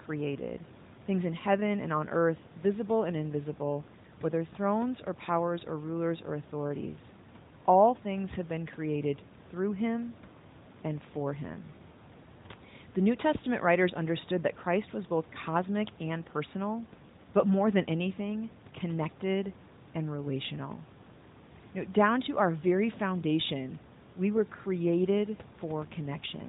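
No faults detected in the speech; room noise sits about 21 dB below it, and the AMR narrowband mobile codec at 12.2 kbps leaves only light coding damage with nothing above 4 kHz.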